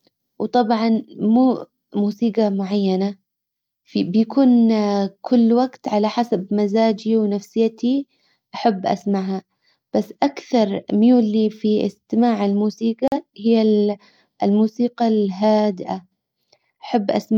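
At about 13.08 s the speech drops out for roughly a tenth of a second, through 13.17 s. That's a digital broadcast dropout: a frame didn't come through intact, so the receiver muted until good frames resumed. About 43 ms of programme, likely one frame, is simply gone.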